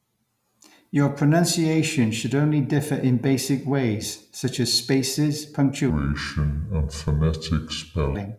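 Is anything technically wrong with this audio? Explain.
Yes. Wrong sample rate from 5.90 to 8.15 s, just after "ways such as spaces": the samples are played out slower than they were captured, with no conversion, which fits 48 kHz audio played at 32 kHz. The speech slows to two-thirds speed and drops about seven semitones, sounding low and dragged.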